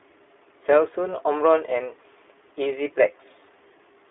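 Throughout, the speech has passed through the iLBC codec, which codes each 20 ms frame's excitation independently of the one before, in a way that fits its 15.2 kbps mode. The line is held to roughly 300 Hz to 3.5 kHz, with nothing above 3.7 kHz, so the sound is thin and muffled. The coding damage is plainly audible as a rough, slightly synthetic grain on the speech.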